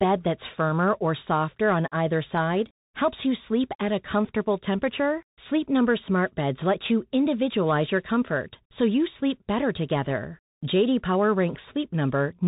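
From start to finish the speech comes through a Bluetooth CVSD headset codec, and you can plainly hear it. The sound is squeezed into the narrow phone band, with nothing above 4 kHz. Because the codec tracks the waveform one bit at a time with an adapting step, s sounds come out scratchy, loud bright moments smear as the step fails to keep up, and a fine granular hiss sits under everything. It's what you'd expect from a 64 kbps CVSD link.

Then, from about 10.05 to 10.12 s, there's a short burst of bit errors on a Bluetooth voice link. Some of the transmitted bits got flipped, with the rate somewhere around one percent. Since every CVSD bit carries the same small weight and the damage fades out quickly, you don't get sharp clicks. Instead there's a brief rushing, crackly roughness over those 70-odd milliseconds, spread across 20 frames.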